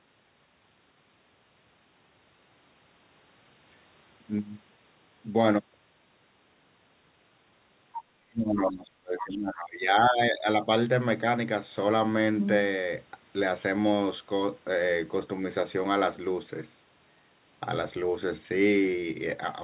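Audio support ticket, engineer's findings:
Other side's voice leaking through: brief far-end fragments at 7.93–8.04 s, 8.66–8.71 s and 9.18–9.24 s, roughly 10 to 15 dB under the near talker. Likely residual loudspeaker echo the canceller failed to remove from the mic.

Speech suppressed in double talk: 8.29–10.47 s, near talker drops by as much as roughly 25 dB, about two seconds affected, overlapping the leak bursts. Likely echo canceller unable to separate talker from echo, attenuating both.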